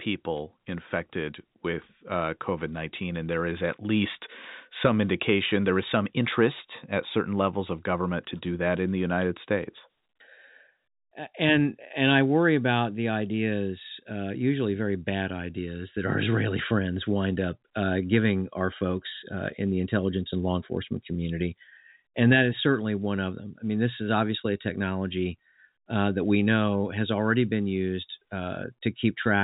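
Nothing stood out on listening to this speech, which is carried over an ordinary telephone-band line with nothing above roughly 3.8 kHz.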